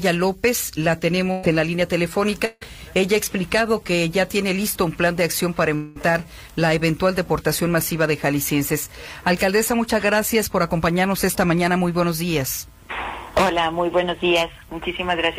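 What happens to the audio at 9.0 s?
Nothing goes wrong at 9.0 s: the audio plays through that moment intact, with no dropout, glitch or other fault.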